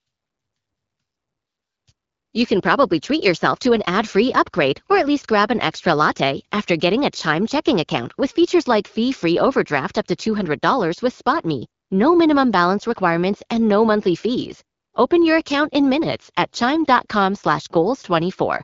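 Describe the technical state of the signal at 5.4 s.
At 5.4 s the speech is intact, with no fault present, and it carries the band-limited character of AMR wideband (HD Voice) coding at 12.65 kbit/s, where speech stays clear.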